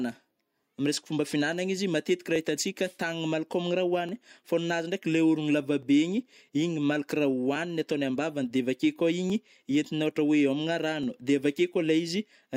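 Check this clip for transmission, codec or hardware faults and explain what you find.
One fault runs through the speech: clock drift buffer slips, heard from 0.63 s to 11.03 s. The pattern points to two devices on independent clocks, likely differing by a few hundred parts per million, so the buffer between them gradually overfills or drains. Each time it reaches its limit, a few dozen samples are dropped or repeated. The speech gets a regular click at steady intervals of 1.73 s, about seven times.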